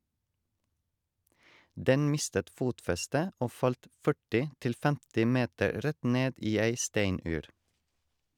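Listening through the speech from beginning to end, nothing stood out as a technical problem at any point.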